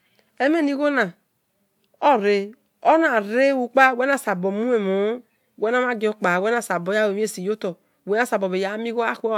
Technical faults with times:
none

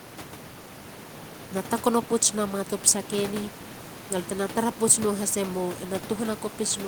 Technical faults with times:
none

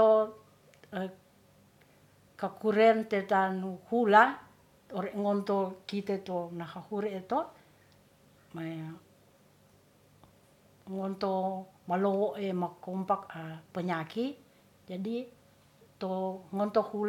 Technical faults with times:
none

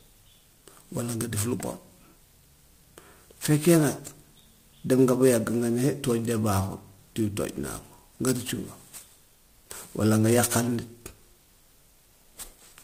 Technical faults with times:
0.00-12.84 sample clock jitter

